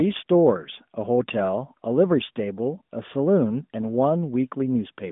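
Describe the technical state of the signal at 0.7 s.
At 0.7 s the signal is intact, with no fault to be heard at that moment, only the narrow band of the AMR narrowband mobile codec it passes through.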